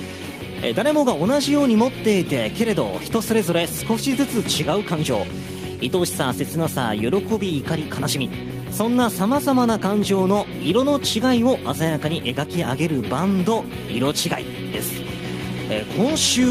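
No technical faults can be heard anywhere in this recording.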